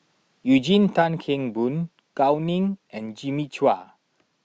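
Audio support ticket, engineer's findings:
Microphone volume stepped down at 1.02 s. Speech and background fall together by about 4 dB, in one abrupt step. No gradual ramp. Level holds at the new setting afterwards. Probable component: the call software's automatic input control. Likely cause: it judged the microphone too hot and cut the device input volume once.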